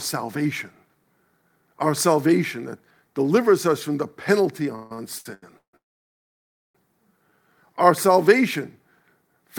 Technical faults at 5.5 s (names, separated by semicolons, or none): repeated stalls (stutter)